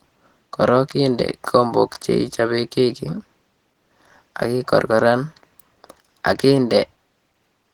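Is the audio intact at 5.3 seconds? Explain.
No. At 5.3 seconds, as throughout the speech, Opus voice compression at 16 kbps is plainly audible. In hybrid mode, SILK's linear prediction codes the lower band coarsely and CELT handles the top in 20 ms frames, leaving a hoarse, slightly robotic edge. Unlike band-limiting damage, the highs reach about 20.3 kHz.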